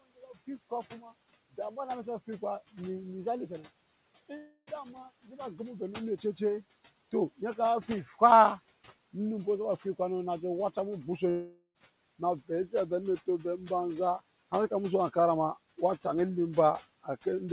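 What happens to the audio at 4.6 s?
At 4.6 s the sound sits inside a gap running from 4.37 to 4.70 s, likely a long network dropout: roughly 0.3 s of audio never arrived, so the receiver stretched the last sound into a fading buzz, ending in about 30 ms of silence before audio resumes.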